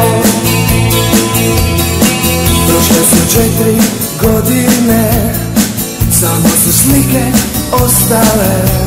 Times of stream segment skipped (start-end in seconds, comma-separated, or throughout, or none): none